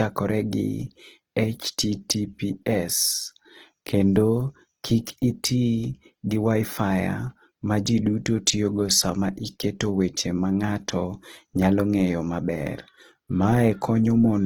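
Throughout, the speech sounds grainy and rough, likely Opus compression in its music mode near 16 kbps; a spectrogram shows noise-filled bands reaching 20.2 kHz.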